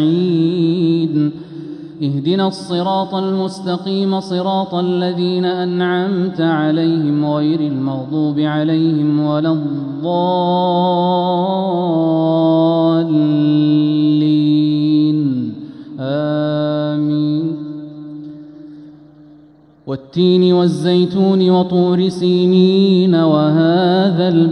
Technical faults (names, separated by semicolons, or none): none